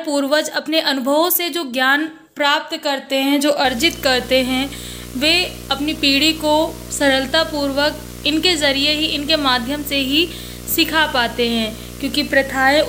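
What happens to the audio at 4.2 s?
A screen or video cable is coupling its signal into the audio path, so by 4.2 s the sound carries video or display buzz. It starts at 3.65 s and runs to the end of the clip. The picture's field refresh leaks in as a steady 60 Hz buzz with a gritty hash of harmonics on top. It sits only roughly 15 dB below the wanted sound.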